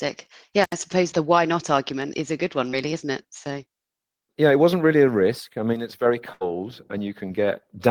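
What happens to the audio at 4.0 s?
Nothing goes wrong at 4.0 s: the speech carries straight through that moment with no dropout, click, glitch or other fault.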